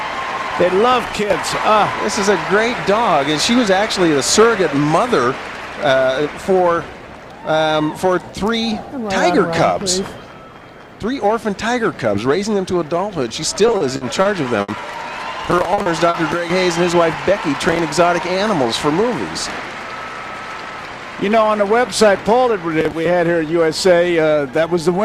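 From 13.67 to 14.84 s the sound turns choppy, with short holes recurring across the stretch. This is repeated packet loss: seven gaps, the longest 70 ms, were each bridged by stretching the preceding sound, so about 19% of the span is concealed.

At 15.74, 15.82 and 16.10 s come brief smears, each lasting 70 ms. These are short concealed packet losses. About 40 ms went missing each time and was filled by continuing the last sound before blending back into the real signal.

Between 18.03 and 19.00 s the audio runs quicker, about 4% fast, with its pitch unchanged. This is a jitter buffer speed-up. Excess buffered audio was trimmed by repeatedly cutting pitch-period-length slivers, removing a few hundredths of a second in total.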